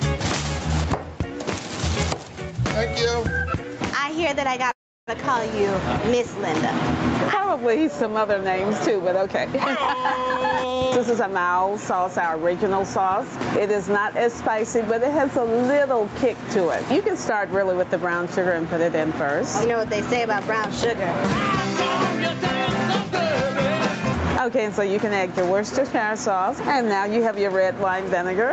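Gain pumping runs through the whole clip: quieter passages and the background swell up and then duck by about 15 dB under each loud sound, likely from gain set too high with a fast limiter pulling it back. Unlike plain heavy compression, you hear the breathing movement of the background. A call audio freeze occurs from 4.71 to 5.09 s. The sound trails off into about 0.33 s of near-silence, likely from an empty jitter buffer waiting for delayed packets. It then resumes exactly where it stopped, so 0.36 s of gap is inserted and nothing is lost, which separates it from a dropout. Jitter buffer speed-up hurries the audio at unchanged pitch three times as the receiver trims pitch periods to shrink its delay. From 10.29 to 11.39 s it runs at 116% speed, removing roughly 200 ms, which is clearly rushed. From 19.14 to 20.95 s it runs at 105%, removing about 100 ms. From 22.32 to 24.60 s it runs at 102%, removing about 70 ms. 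Unchanged pitch sets this apart from a sample-rate error. The call path's Opus coding at 64 kbps leaves nothing above 8 kHz.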